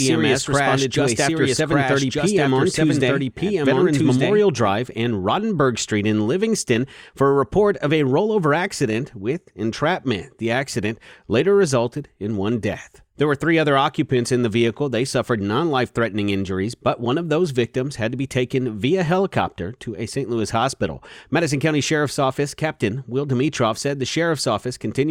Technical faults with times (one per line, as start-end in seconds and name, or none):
0.00-4.72 doubled audio track